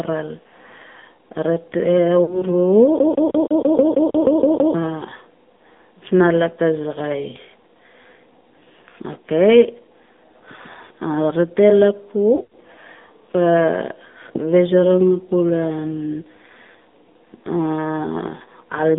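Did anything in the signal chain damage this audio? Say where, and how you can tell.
Yes. The AMR narrowband mobile codec, at the codec stage, shapes the whole speech clip. The audio sits inside a 200 Hz to 3.6 kHz band with nothing above, and the voice has a buzzy, synthetic edge. That comes from the decoder rebuilding each 20 ms frame from a vocal-tract filter excited by a few pulses rather than from the actual waveform. The damage is plainly audible, which fits a low AMR-NB mode around 7.4 kbps.

Lost AMR speech frames, at the network stage, appear at 2.24–2.43 s and 12.36–12.53 s. When a frame fails its checksum, the decoder repeats the last good pitch and filter settings at falling gain. At 2.24 s this gives a short smeared warble and dip, which fits two lost frames. At 12.36 s the sound drags and fades in several bursts spread over about 160 ms, with the longest fade around 80 ms. 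Each time, the voice returns briefly weak or rough.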